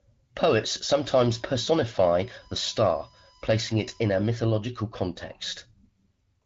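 From 0.95 to 4.30 s there's a USB whine under the speech: a fixed tone built on 1 kHz, loudest at the 5 kHz harmonic, roughly 30 dB down. That's the bus's 1 ms frame current leaking through power or ground, all under light AMR-WB coding.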